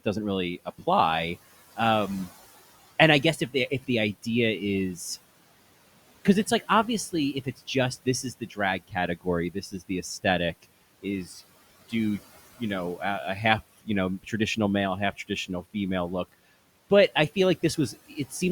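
Speech with room noise sitting about 21 dB under it. The trouble is speech cut by the noise suppressor: it mistakes quiet parts of the speech for background and pulls them down along with the noise, so endings and soft consonants go swallowed. It's heaviest between 6.25 and 11.93 s, where well under a second of scattered moments drop by up to about 18 dB. Shorter dips follow at 13.79–14.57 s (about 18 dB), 15.13–15.75 s (about 14 dB) and 17.93–18.42 s (about 9 dB).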